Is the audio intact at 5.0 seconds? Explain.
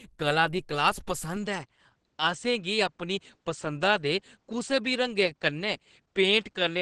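No. At 5.0 s the sound is muffled and hoarse, with plainly audible codec damage and nothing above 12 kHz. This points to Opus compression at 16 kbps running in its hybrid mode, which is present throughout the clip. At such a low rate the encoder gives up its full music coding. It codes the lower band with its speech-oriented layer and fills the upper band from a coarse description, which leaves the tone hoarse and dull.

The moment also falls inside a change that begins at 1.36 s, right after "कला दी क्लास", and lasts to the end of the clip. From there the top of the band drops further, with nothing above 8.5 kHz, so the sound turns duller. There is no gap at the changeover and the loudness stays the same. A new background noise appears, sitting roughly 50 dB under the signal. The likely cause is an input switched to a poorer device mid-recording, such as another microphone or a headset's call profile, which has a narrower band and its own noise floor.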